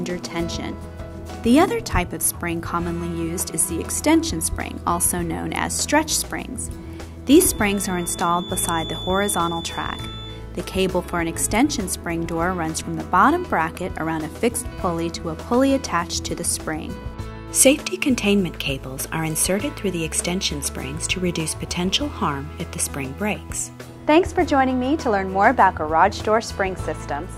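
From 7.22 to 10.44 s a thin, steady whistle near 3.5 kHz sits behind the sound, roughly 15 dB below it. Its level swells and fades slowly. This is a feedback whistle. Likely the loudspeaker-to-microphone loop is hovering at the edge of feedback, sustaining one tone.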